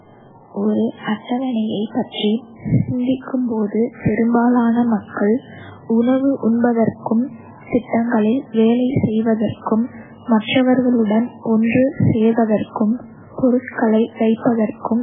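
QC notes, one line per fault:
Throughout, MP3 compression: the audio has nothing above 3.7 kHz, and the speech has a heavily watery, swirling texture, with s sounds thinned to metallic chirps and consonant attacks smeared. This is likely an MP3 encoder starved of bits, which fits a very low rate near 8 kbps. It cuts the treble at a fixed point and drops weak frequency lines that flicker on and off between frames.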